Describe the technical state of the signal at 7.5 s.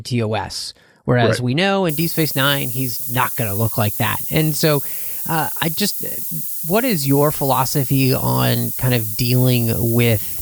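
At 7.5 s the speech is under low bit depth with noise shaping, running from 1.89 s to the end. The coarse rounding, which points to about 5 bits, has its error pushed upward, giving a steady, thin hiss nearly as loud as the speech and strongest at the top.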